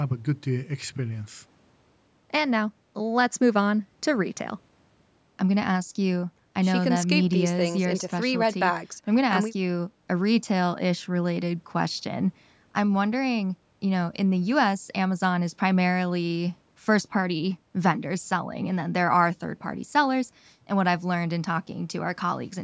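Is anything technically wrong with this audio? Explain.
No, nothing is technically wrong with this audio.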